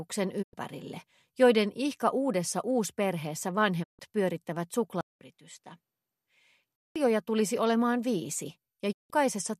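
At 0.41 s the receiver loses the digital stream, or its frames fail their checksum, and it mutes. The result is a digital broadcast dropout: the sound fades out over 20 ms into a hole of about 96 ms and returns by 0.55 s. The same happens at 3.82 s, with a longer gap of about 144 ms that ends at 4.01 s.

From 5.01 s to 6.96 s the input is likely switched to a poorer device. A 200 ms silence marks the change. The sound then turns duller and noticeably quieter, with nothing above 11.4 kHz and a faint new noise floor well below the signal.

At 8.91 s a third dropout mutes the sound for about 168 ms, and it comes back at 9.12 s.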